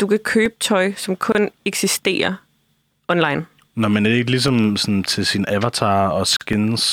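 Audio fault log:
0.46–6.53 s, periodic USB or driver dropouts: starting just after "du kan", brief losses of roughly 2 ms recur every 2.0 s as regular ticks in the speech. A background task blocking the bus or driver drops audio, and the gaps are filled with silence.
1.32–1.35 s and 6.36–6.41 s, gap at a join of encoded pieces: silences of 26 ms and 46 ms open in continuous speech, then the speech resumes where it stopped. Separately encoded pieces were joined with their start delay and end padding untrimmed.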